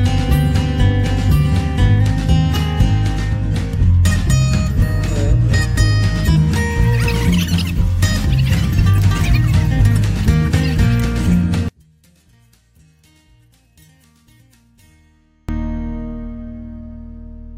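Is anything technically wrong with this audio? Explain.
Yes. From 11.68 to 15.49 s the sound drops by about 37 dB and turns faint, likely because one channel is inverted. With reversed polarity, the content shared by both channels cancels on mono summing, leaving only their small difference.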